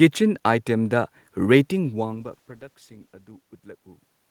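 From 2.15 to 4.01 s, a call bitrate drop from 32 to 16 kbps roughens the speech. Unlike the talker moving around 2 s, the level holds while detail coarsens.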